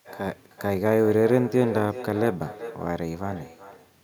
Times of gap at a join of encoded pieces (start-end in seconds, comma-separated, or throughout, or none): none